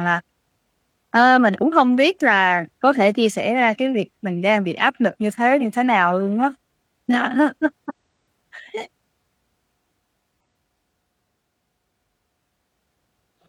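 Damaged data in a compressed stream breaks the speech four times: 1.58–1.63 s, 5.58–5.61 s, 7.85–7.92 s, and at 10.41 s. Corrupted bytes make the decoder misread frames and lose sync. Each spot is a brief chirp, squawk, click or short hole.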